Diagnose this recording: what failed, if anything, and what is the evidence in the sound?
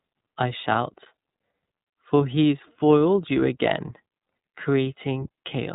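The fault sits at the codec stage: the speech has passed through the iLBC codec. Throughout, nothing reaches above about 3.8 kHz, so it sounds narrowband. The texture is plainly rough and synthetic. Each 30 ms frame is coded on its own, and the rate fits 13.33 kbps.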